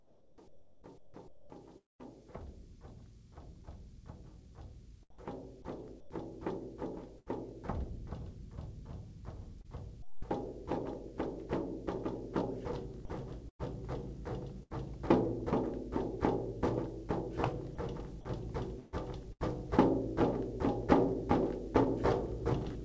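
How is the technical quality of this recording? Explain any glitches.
The recording has clear transmission faults, with audio carried over a call link that leaves nothing above 8 kHz.

From 0 to 2.01 s, 5.10 to 5.18 s and 6.00 to 6.10 s, comfort noise replaces the background. A voice detector at the sending end likely judged these stretches silent and stopped transmitting. The receiver then filled the gap with synthetic noise. At 5.10 s the texture goes flat for 80 ms and drops about 6 dB. At 6.00 s it goes flat for 100 ms and drops about 8 dB.

A long network dropout sits at the end of the opening stretch, from 1.78 to 2.01 s. About 220 ms of audio never arrived, likely because of lost packets. The receiver stretched the last sound for a brief fading fill. Then roughly 190 ms of near silence follows. The audio resumes after that, with the missing portion simply gone.

Sound chopped by the voice detector appears from 7.18 to 11.04 s, 13.05 to 15.28 s and 17.75 to 21.86 s. 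The sending detector likely switched on and off repeatedly inside each span. Short pieces of the sound were swapped for comfort noise, about 0.3 s in total in the first span, 0.2 s in the second and 0.3 s in the third. The result is choppy.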